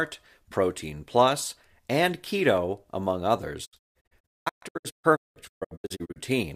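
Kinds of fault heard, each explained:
Digital broadcast dropout: the receiver stopped getting valid frames and muted, so from 3.64 to 6.18 s the speech breaks into repeated silent holes, each faded over 20 ms, totalling 1.47 s and none longer than 192 ms. Unlike packet-loss concealment, nothing fills the gaps.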